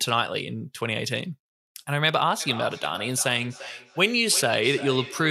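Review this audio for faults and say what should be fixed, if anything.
A feedback echo between two devices runs from 2.4 s to the end of the clip at 5.3 s. The speech returns roughly every third of a second, with the loudest repeats about 14 dB below the direct sound. Each pass is thinner and more ringing. One device plays what the other's microphone captured, and that microphone picks it up again. Its echo canceller only removes its own playback, so the loop goes uncancelled. On a waveform, fainter copies of each burst trail behind it at evenly spaced intervals. On a spectrogram, the harmonic stripes repeat as ghosted copies shifted right in time, losing low and high frequencies with each return. To prevent it, keep only one device connected to the call in the room, or mute the second device's microphone and speaker.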